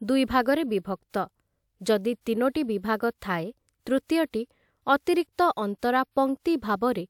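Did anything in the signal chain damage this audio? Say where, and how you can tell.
No, nothing along the signal chain has audibly damaged this speech recording, and the signal holds steady and continuous at every stage it has passed through.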